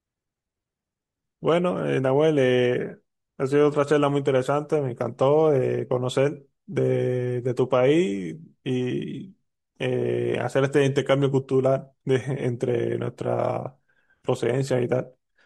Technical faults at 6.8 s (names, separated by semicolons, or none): none